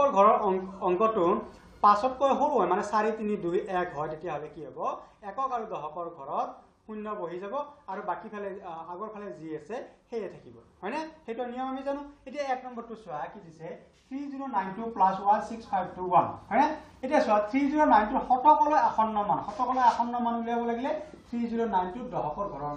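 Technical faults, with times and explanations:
4.01–4.78 s and 14.51–14.85 s, zipper noise: the level falls by about 10 dB, then later rises by about 10 dB. Each move is made in unsmoothed 3 dB jumps, around four per second and then around ten per second, and each jump leaves a small click, heard as a brief ticking zip.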